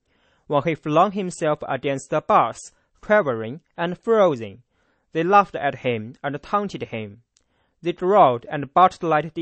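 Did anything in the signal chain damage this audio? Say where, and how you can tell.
Yes, at the codec stage. For the whole clip the speech has nothing above 8.4 kHz and a plainly audible watery swirl. That's likely MP3 compression at a starved bitrate, something like 32 kbps, chopping the treble and flickering weak frequency lines on and off between frames.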